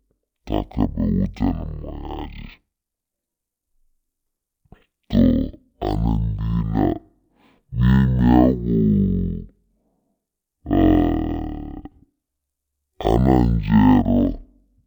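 Speech runs throughout at half speed and an octave low, the mark of stereo read as mono: interleaved left and right samples are played back-to-back as one channel. A spectrogram shows the speech compressed downward, with a fainter mirrored copy in the upper half.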